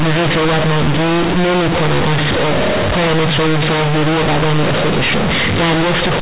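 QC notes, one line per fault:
Throughout: companded audio read as linear; A-law bytes played as raw 8-bit samples, so quiet equals loud: harsh buzz, slab-like waveform, spectrogram noise filling pauses.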